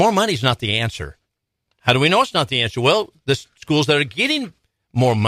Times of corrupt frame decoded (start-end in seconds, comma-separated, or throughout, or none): none